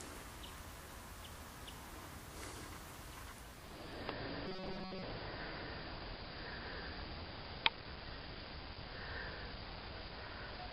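Compressed frames skipped at 1.35 s: a couple of whole frames never reach the output, either missing from the stream or rejected by the decoder as damaged, so playback jumps forward by around 50 ms. You hear a tiny lurch where a slice of the sound is simply absent.

Robotic sound from repeated short buffers runs from 4.46 to 5.03 s. The sound takes on a rigid, metallic buzz at 188 Hz, which matches a loop of roughly 5.3 ms played over and over. The likely cause is fresh audio arriving too slowly, with the software repeating the last short buffer to fill the gap. Most of that stretch is repeated material, so the original detail is skipped while its rough shape still comes through.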